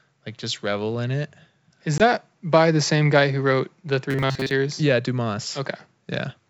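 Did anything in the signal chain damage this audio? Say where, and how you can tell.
Yes. At the network stage there is packet loss on an ADPCM call, a hard-edged 20 ms hole at 1.98 to 2.02 s, right before "by the same guy". That is about one packet's worth of audio replaced by silence. Because ADPCM codes each sample relative to an adaptive predictor and step size, the decoder's state no longer matches the sender's when audio resumes, so the onset comes back slightly distorted and settles within some tens of milliseconds.

From 4.11 to 4.51 s the speech turns into a rigid, metallic buzz pitched at 134 Hz that still loosely tracks the syllables. This is robotic sound from repeated short buffers, likely at the driver or buffer stage. When fresh audio arrives too slowly, the same short block is replayed, and a 134 Hz repetition rate fits a block of roughly 7.5 ms. Most of that stretch, around 70%, is repeated material rather than new audio, and the skipped speech never returns.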